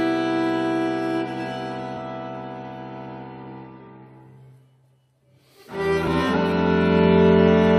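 Damaged data in a compressed stream shows up twice in this music, at 1.96 s and again at 6.07 s. At each point a short run of the encoded data is corrupt, so the decoder cannot read those frames correctly, loses its place in the stream and has to hunt for the next valid frame header before playback settles. Each event is heard as a brief chirp, squawk, click or short hole lasting under 20 ms.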